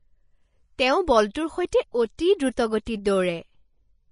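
Throughout, the speech sounds hissy and grainy with nothing above 10.6 kHz, likely Vorbis compression at a bitrate around 26 kbps quantising treble detail into noise. Pre-echo appears at 1.33 s, 1.70 to 1.72 s, 2.17 s and 2.38 s: block-spread quantisation noise leaks 12 to 20 ms ahead of sharp attacks, heard as brief hiss and softened onsets.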